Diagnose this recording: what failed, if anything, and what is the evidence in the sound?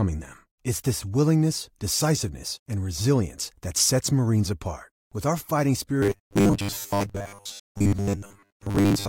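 Robotic sound from repeated short buffers, likely a driver or buffer fault. From 6.03 s, after "our fighting", to the end, the speech is a rigid metallic buzz. Starved of new audio, the output mostly repeats one 10 ms block, imposing a 100 Hz pitch.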